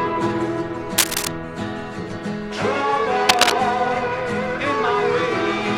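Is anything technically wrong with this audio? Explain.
Yes. A worn cable, plug or control was likely being moved, its contact resistance jumping erratically. This cable scratch noise appears from 0.98 to 1.27 s at about the level of the sound, and from 3.29 to 3.52 s about 5 dB above it, as dense, uneven scratching bursts.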